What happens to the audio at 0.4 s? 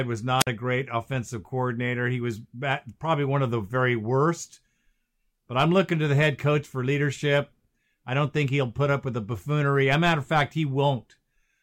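A wireless microphone squelch dropout occurs between 0.39 and 0.47 s. The analogue FM radio link fades, and once the received signal falls too low, the receiver's squelch mutes its output to keep the hiss of a weak carrier off the line. You hear a brief swell of hiss or static as the signal weakens, then a hole of near silence lasting about 51 ms, and then the speech returns.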